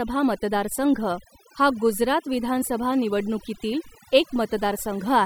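From the first second to the last, this speech has overdone noise removal: the reducer was pushed too hard, so bands sitting near its noise estimate get pulled right down, taking quiet bits of the voice along. Gaps go near-silent with twinkly specks.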